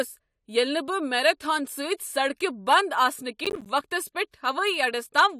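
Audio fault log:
3.45–3.66 s, processor overload crackle: roughly ten buffers of about 10 ms each missed their deadlines, each dropping to silence, giving a gritty crackling burst.
4.31–4.34 s, pre-echo: quantisation noise from a late attack spread about 24 ms ahead of it within its transform block, so a brief hiss leads the onset and softens it.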